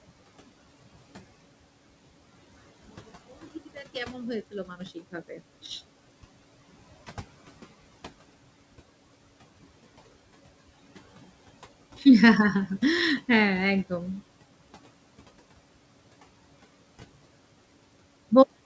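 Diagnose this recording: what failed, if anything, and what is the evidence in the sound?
The call processing's noise suppressor is attenuating the background by about 17 dB throughout, gating each frequency band frame by frame according to whether it judges that band to be steady noise. The residual room noise therefore rises beneath the speech and drops away in the pauses.

The same suppressor misjudges part of the speech as noise between 4.51 and 5.39 s. Roughly a fifth of a second of that stretch is affected, with the deepest cut at about 14 dB, so soft consonants and word tails are pulled down along with the background. Those moments sound swallowed or oddly faint compared with the speech around them.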